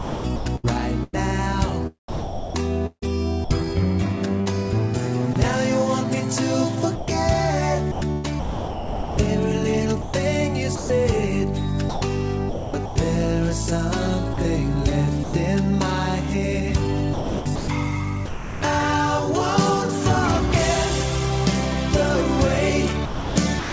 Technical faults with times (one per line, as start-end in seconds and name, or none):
0.00-5.36 sound chopped by the voice detector
6.96-12.96 sound chopped by the voice detector
14.34-15.34 sound chopped by the voice detector
17.14-18.62 sound chopped by the voice detector
23.06-23.73 sound chopped by the voice detector